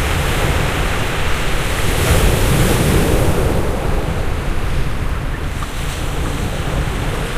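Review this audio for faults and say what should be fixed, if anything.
Nothing here needs fixing. No technical faults can be heard anywhere in the recording.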